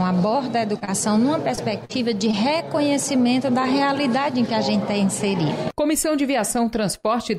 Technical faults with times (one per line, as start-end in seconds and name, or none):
0.79-0.89 short concealed packet loss
1.55-1.59 short concealed packet loss
1.85-1.91 short concealed packet loss
2.31-2.35 short concealed packet loss